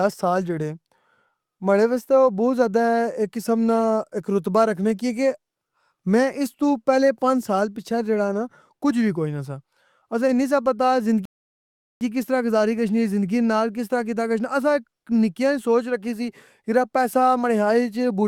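A rebuffering stall runs from 11.25 to 12.01 s. The player exhausted its downloaded audio and halted until more data arrived, so the speech drops to silence for about 0.76 s, then picks up exactly where it stopped with "کس طرح گزاری گشنی", nothing skipped.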